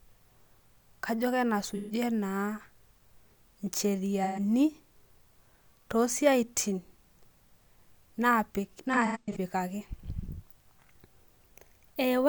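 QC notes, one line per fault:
1.69–1.91 s, 4.23–4.39 s, 8.93–9.37 s: AAC frame loss with concealment. Smeared, noisy patches where the decoder rebuilds lost audio from the last good spectrum: about 128 ms each in the first two, and 256 ms in the third, scattered across roughly 430 ms with the longest run about 100 ms.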